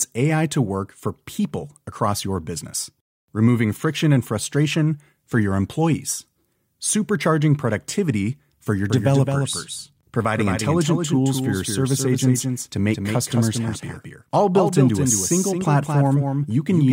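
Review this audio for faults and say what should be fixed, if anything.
From 8.90 s to the end, a doubled audio track appears: a second full-band copy of the speech trails the original by around 200 ms, about 5 dB quieter, starting abruptly with no decay or room colour. The likely cause is the same signal reaching the mix twice, once through a slower capture path. To prevent it, route each source into the mix through a single path and check for duplicate inputs before recording.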